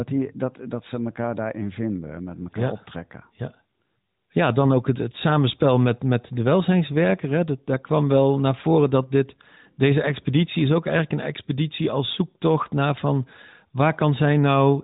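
No technical faults are audible anywhere in this recording.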